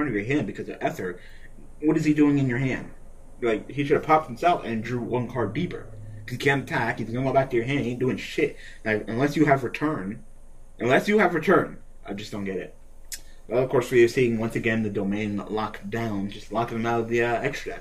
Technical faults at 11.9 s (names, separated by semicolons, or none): none